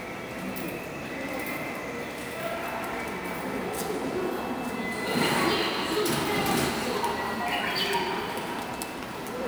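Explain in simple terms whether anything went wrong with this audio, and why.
Something did go wrong here, and it runs through the whole clip from start to finish. It's sample clock jitter: the clock timing each sample wobbles by a few millionths of a second, so samples land slightly early or late. That small timing error turns into a grainy hiss that sits on the sound itself, rougher on the louder and brighter moments and gone in the quiet gaps.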